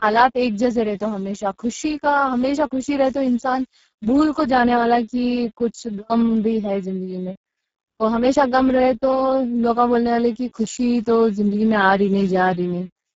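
Speex codec damage runs through the whole speech clip. The sound is hoarse and noisy, which fits a setting near 6 kbps, where this CELP coder has too few bits to rebuild the excitation. Nothing sounds above about 7.7 kHz, and the upper band beyond 4 kHz comes across as shaped, hissy fill rather than real detail.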